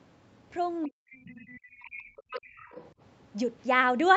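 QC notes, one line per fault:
0.85–2.59 s, speech suppressed in double talk: the talker dips, dropping by roughly 40 dB at worst over about 1.5 s, likely the echo canceller attenuating both sides during overlap.
1.78–1.82 s and 2.32–2.92 s, other side's voice leaking through: a faint second voice, about 30 dB then about 20 dB under the talker, is likely residual loudspeaker echo the canceller left in.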